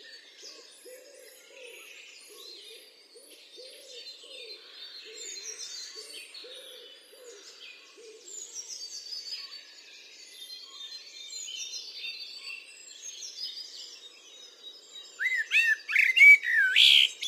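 A fine hiss and grainy roughness ride on the sound for the whole clip, growing on loud and bright passages. This is sample clock jitter: the converter's clock wanders by a couple of microseconds, so samples land early or late. On steep waveform slopes that timing slip becomes an error roughly 30 dB below the signal.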